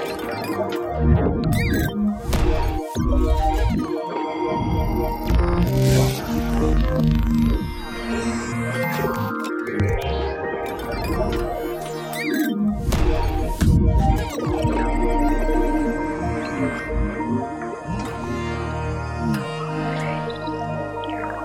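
No technical faults can be heard anywhere in the clip.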